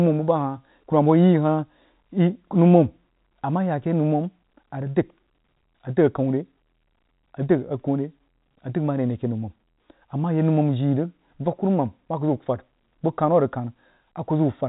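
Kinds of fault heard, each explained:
No fault can be heard in the speech. The G.711 telephone coding path is audible only as the usual telephone band, with nothing above about 3.8 kHz.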